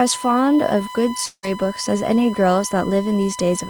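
A USB whine runs through the whole speech clip: a fixed tone at 1 kHz, sitting roughly 15 dB below the speech. It comes from the bus's 1 ms frame timing leaking into the audio through shared power or ground, so it holds steady pitch regardless of what is said.

From 1.25 s to 1.45 s the speech breaks off into a buzzy continuation of the last sound that fades out, leaving a short silence of about 50 ms. Speech then resumes with about 0.18 s missing. This is likely a long network dropout, with the receiver concealing the gap.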